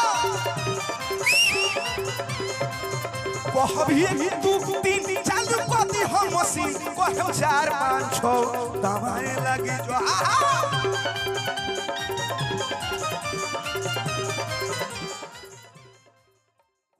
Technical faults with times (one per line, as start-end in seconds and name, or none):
none